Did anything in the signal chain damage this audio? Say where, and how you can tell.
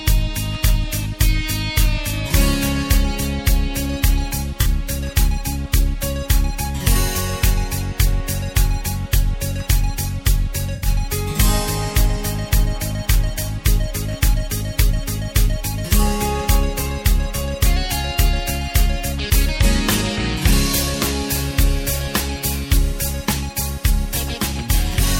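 Yes, in the codec stage. AAC frame loss with concealment is audible at 4.61 to 4.67 s and 10.73 to 10.88 s as brief smeared, phasey patches. The decoder rebuilt missing frames from the last good spectrum. The gaps fit roughly two and four lost frames.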